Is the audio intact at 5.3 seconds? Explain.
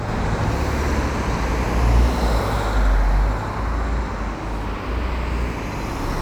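No. Channel delay doubling runs through the whole clip: one channel lags by about 85 ms, which fits a 4096-sample buffer, and summing to mono produces an equal-level slap echo.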